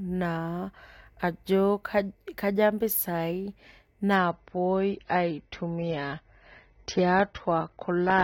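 Adaptive stream at a lower bitrate from 4.16 s to the end of this speech: abruptly and without a gap, nothing remains above 6.3 kHz, pointing to a much lower-bitrate stream version.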